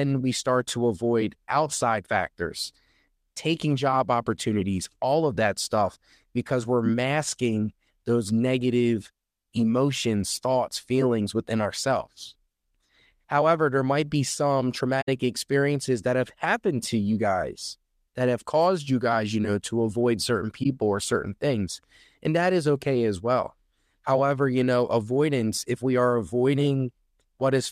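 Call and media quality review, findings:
Corrupt frame concealed, 15.01–15.09 s after "there might be some" and 20.63–20.66 s after "know to avoid certain". AAC decoder detected damaged frames and masked them. Concealed spans about three frames and one frame wide.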